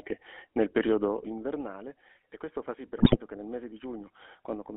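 From start to finish the speech carries the GSM full-rate codec. The coder rebuilds each stretch from a vocal-tract filter driven by a sparse, regularly spaced pulse excitation, and the plainly audible result is a buzzy, gravelly roughness with a thin, boxed-in tone. The sound fits the 13 kbps full-rate coder behind a 250 to 3400 Hz line band. On a spectrogram the energy stops sharply near 3.4 kHz with little below 250 Hz, and the harmonics look smeared and grainy rather than clean.

From 2.98 to 3.17 s, just after "questo fa sì per" and before "che nel mese di", GSM bit errors take over. Corrupted filter, pitch and gain values reach the decoder, so the spectrum is bent and the level jumps frame by frame, giving squawks, pops and a gargling break lasting about 190 ms, consistent with a short run of damaged 20 ms frames. The waveform shows sudden amplitude spikes and uneven blocks, and the spectrogram shows abrupt vertical bands of misplaced energy.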